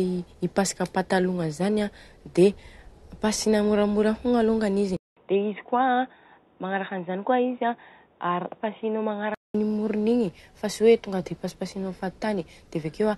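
At 4.97 s a 200 ms gap precedes dull speech cut off above 3.8 kHz until 9.55 s, likely an input switched to a poorer device.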